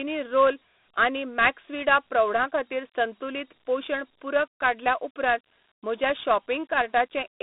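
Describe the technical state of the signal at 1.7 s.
At 1.7 s you're hearing Dialogic VOX ADPCM, which runs through the whole clip. Each sample is coded as a coarse 4-bit step that adapts to the signal, so a gritty hiss rides along with the speech. The band sits roughly between 200 Hz and 3.7 kHz, with nothing above 3.8 kHz, which fits 32 kbps at 8,000 samples a second.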